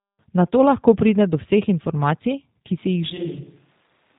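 Speech clip carried through a G.729 codec for its whole length: nothing passes above 3.8 kHz, and the voice has the rough, synthetic texture of low-rate pulse-excited coding, which fits the 8 kbit/s G.729A variant with plainly audible codec damage. From 3.1 s to the end the sound suddenly turns roomy and hollow, loses bass, drops roughly 10 dB, and gains room noise at around 30 dB below the speech, likely from a switch to a distant microphone after the close one dropped out.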